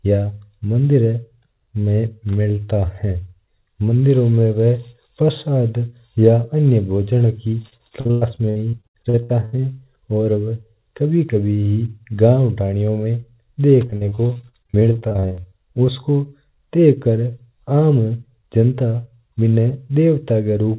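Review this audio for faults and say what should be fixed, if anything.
Repeated packet loss (robotic sound) breaks up the speech from 7.62 to 9.61 s and again from 13.87 to 15.53 s. Many short holes, the longest 104 ms in the first stretch and 40 ms in the second, are each patched by extending the last sound. Roughly a third of each span is filled in this way. A single dropout gives one gap, but here the holes recur rapidly, so the sound turns into a continuous choppy, robotic warble. The fix is to cut the network loss, or to add forward error correction and a deeper jitter buffer.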